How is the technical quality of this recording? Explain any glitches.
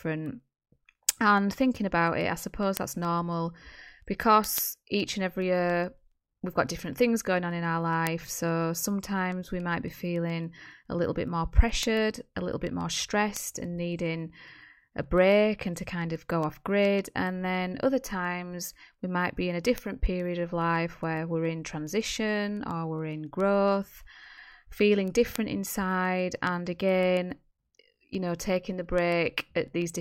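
The recording has a steady run of word clock ticks from 0.12 s to 29.96 s, through the whole of the speech. The receiving device is running on its own clock instead of locking to the digital link's sender, so the two drift past each other and one sample gets dropped or repeated at each slip. The slips come around every 0.15 s, roughly 200 in all, which fits a clock mismatch in the region of 150 ppm. Each one is heard as a short, sharp tick, giving a regular clicking pattern under the speech.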